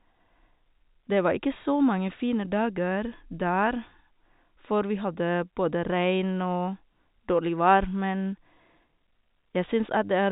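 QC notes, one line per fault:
No faults are present: the speech carries the narrow telephone band of G.711 telephone coding, with nothing above 4 kHz and only a faint quantisation hiss that rises and falls with the level.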